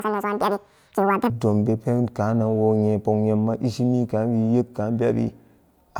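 Right at the start, from 0 to 1.3 s, there's a section at the wrong speed: the speech runs at 1.99 times its recorded rate, so it comes out high and hurried, pitched up around ten semitones. That stretch was likely fitted to the wrong clock during editing or playback.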